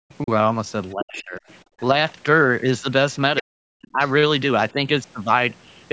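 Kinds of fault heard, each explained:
Speech suppressed in double talk: the talker's speech keeps ducking, from small dips to near dropouts, with the longest holes at 0.94 to 1.43 s and 3.41 to 4.0 s. That's likely the echo canceller turning everything down while both ends talked at once.
Other side's voice leaking through: short scraps of a second voice, well below the main talker, come through around 1.2 s and again just after 4.0 s. Most likely that's loudspeaker sound the echo canceller didn't fully remove from the microphone.
Background gated by the echo canceller: from 1.71 to 1.79 s the room sound drops by about 23 dB for a brief moment and then comes back. That's the canceller clamping the microphone hard while the loudspeaker was playing, then letting go.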